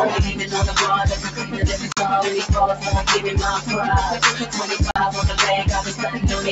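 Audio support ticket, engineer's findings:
Noise suppressor applied to music or sounds, whole clip. A speech-tuned suppressor left active treats sustained content, ambience and tails as noise. Gain swings by roughly 10 dB, so held sound pumps and thins while attacks pass. Band-limited top end, nothing above 8 kHz, consistent with call microphone processing.

Sound cut by the noise suppressor, three events. 1.23–1.59 s: sustained content pulled down by about 8 dB. 4.39–4.54 s: by about 7 dB. 5.88–6.19 s: by about 8 dB. Suppressor misclassifies steady or decaying material as noise. Level sinks and decays are cut short.

Bluetooth dropout, two events. 1.92–1.99 s and 4.91–4.99 s: silent holes, each losing about 46 ms of audio, which fits a few missed packets. Likely cause is late packets to the headphones being discarded. Output resumes further along, as if playback continued through the gap.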